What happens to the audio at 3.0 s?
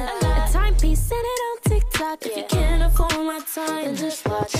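A deep, sudden thump lands at 3.00 s and is gone by 3.07 s, dying away within about 15 ms of its onset. This is a phantom power thump: the microphone supply was switched on or off on a live input, and that abrupt DC step travelled through the input's coupling capacitors, reaching the recording as a single low-frequency pulse that settles almost immediately rather than ringing on.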